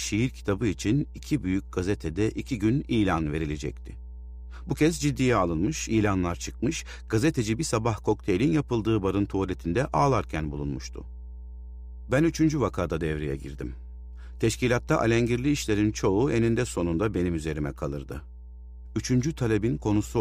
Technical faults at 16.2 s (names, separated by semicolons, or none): mains hum